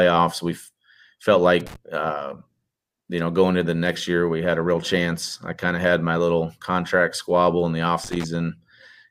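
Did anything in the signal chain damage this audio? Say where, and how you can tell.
Yes. The analogue wiring stage shows loose connector crackle, in two irregular bursts of scratchy crackle in the speech: from 1.60 to 1.76 s, and from 8.04 to 8.24 s, just after "squabble in the off". A worn or dirty contact is making and breaking as it shifts, chopping the signal on and off. The rough, uneven texture of each burst separates it from digital dropouts or clicks, which are clean, single, regularly shaped events.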